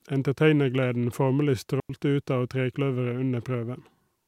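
A digital wireless dropout at 1.80 to 1.90 s: the receiver lost too much data and muted for about 95 ms, leaving a clean, noiseless hole in the speech.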